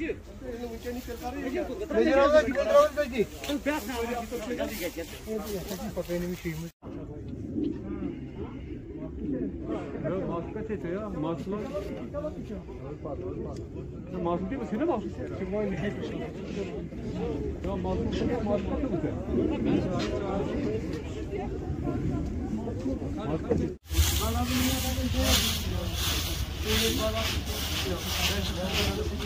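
No technical fault can be heard anywhere in this audio. There is nothing in the sound that needs a time or a cause attached to it.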